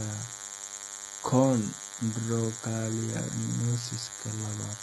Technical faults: DECT cordless phone buzz; HE-AAC compression

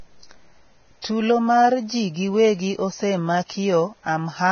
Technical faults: Vorbis compression

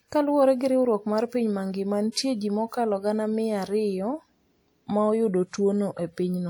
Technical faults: pre-echo

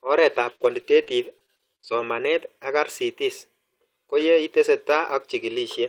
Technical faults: repeated packet loss (robotic sound)

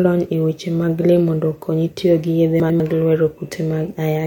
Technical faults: chunks out of order

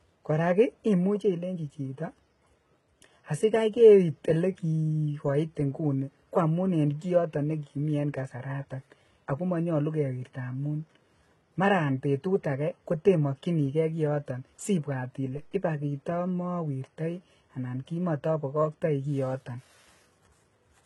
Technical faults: low-bitrate audio saved at a high bitrate; DC step

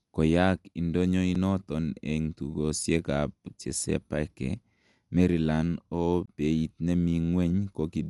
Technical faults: Dolby Digital compression; block of digital silence

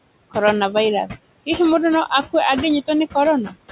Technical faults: noise suppressor artifacts

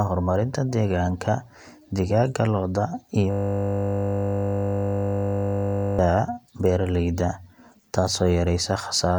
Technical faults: system hang loop

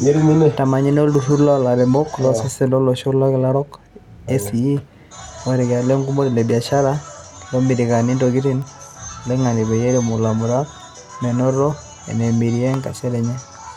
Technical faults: bit error spike

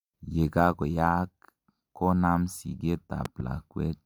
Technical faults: loud pop

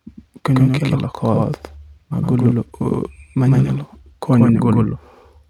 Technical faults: doubled audio track

